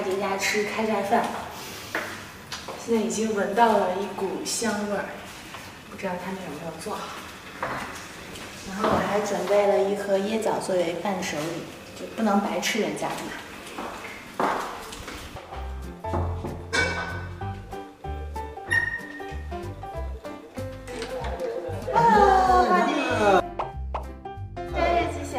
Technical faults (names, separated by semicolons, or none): none